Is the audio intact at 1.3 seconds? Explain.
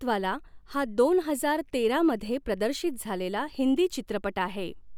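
Yes, the speech at 1.3 seconds is intact, with no dropout, click, distortion or other fault there.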